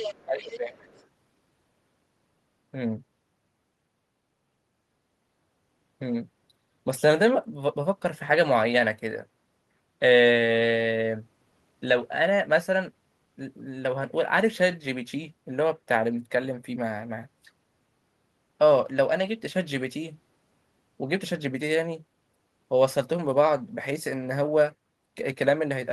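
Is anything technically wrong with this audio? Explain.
Yes, there are two problems, both bunched into the first second or so.

Other side's voice leaking through: from 0.00 to 0.25 s, 0.43 to 0.57 s and 0.80 to 1.07 s you can hear a second voice under the speech. It's fairly strong at first, roughly 10 dB down, then about 15 dB down, and by the last stretch it's very faint. The likely cause is the far end playing on the talker's loudspeaker, with the echo canceller not scrubbing all of it out of the mic.

Speech suppressed in double talk: between 0.25 and 0.85 s the main voice ducks, dropping by up to around 15 dB, for about half a second in total. That's right when both sides overlap. The canceller likely couldn't tell the talker from the echo, so it pulled everything down at once, and the speech comes through dipped and patchy while the other side is going.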